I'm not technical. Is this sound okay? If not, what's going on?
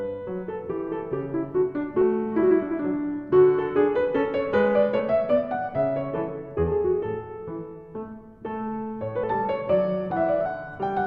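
No. Compressed frames skipped at 2.01, 4.99, 9.23 and 10.45 s. Small chunks of the file, each 20 ms long, were missing or rejected as damaged, so playback jumps ahead about 70 ms twice, then a tenth and a fifth of a second.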